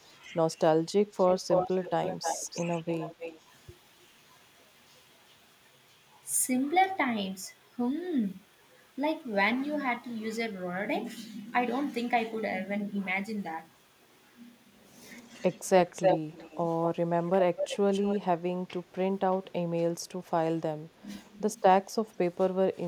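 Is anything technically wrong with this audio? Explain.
Yes, there are two kinds of fault.

Echo leak occurs at 1.18–2.61 s, 2.87–3.38 s, 15.3–15.41 s, 15.93–16.58 s, 17.26–17.3 s and 17.56–18.19 s. A delayed copy of the speech is audible, 310 ms behind at first and 249 ms from 17.26 s. It ranges from about 40 dB down to about level with the speech. This is likely a far-end loudspeaker echo that its canceller failed to remove.

Speech suppressed in double talk occurs at 15.9–15.96 s and 20.99–21.08 s. The speech dips briefly, by about 10 dB and then about 15 dB, for roughly 50 ms and 100 ms. The likely cause is an echo canceller that could not tell its talker from overlapping speech and attenuated both.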